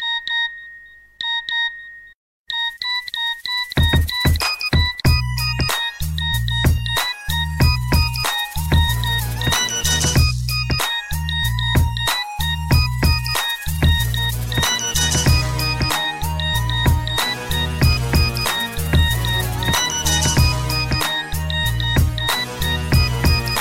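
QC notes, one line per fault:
Nothing stood out on listening.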